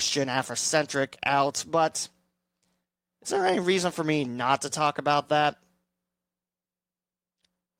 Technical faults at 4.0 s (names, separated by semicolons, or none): none